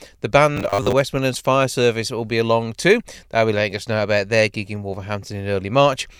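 A speech clip with robotic sound from repeated short buffers between 0.57 and 0.93 s: the voice becomes a rigid, metallic buzz fixed at 100 Hz. This is likely a starved audio stream looping a 10 ms fragment, repeating about half the material while the rest is lost.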